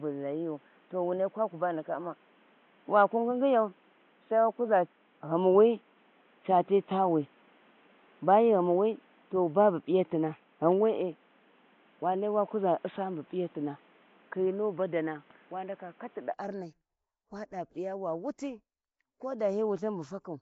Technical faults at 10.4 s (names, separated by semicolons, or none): Nellymoser compression; input switched to a poorer device